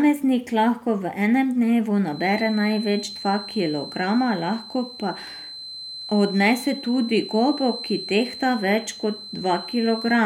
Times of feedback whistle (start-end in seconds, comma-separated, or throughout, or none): 2.05-10.26